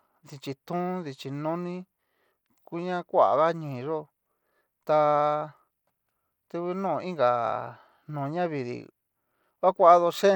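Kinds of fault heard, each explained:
Bluetooth SBC compression: the speech carries plainly audible codec damage throughout, likely from SBC at a low bit pool, which fits roughly 96 kbps. Coarsely quantised sub-bands leave the upper range flickering and grainy, with gritty noise and aliasing riding on the sound.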